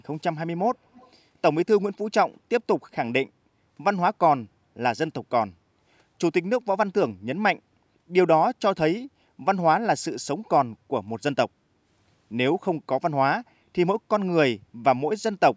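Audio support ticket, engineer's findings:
Echo leak, 0.93–1.11 s: brief, faint delayed copy of the speech, about 30 dB below the direct signal, trailing by 246 ms. Likely a far-end speakerphone whose echo canceller let residual loudspeaker pickup return down the line. Spectrogram: weak ghost of the preceding harmonic and formant pattern, offset about a quarter second later, confined within the call band that stops at 8 kHz. Waveform: only a low-level smear.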